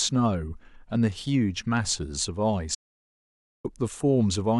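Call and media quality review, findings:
Audio dropout to silence, 2.75–3.65 s: speech cuts mid-flow to silence, no room tone, roughly 0.9 s lost. Likely input device or link dropped while the encoder kept writing silence.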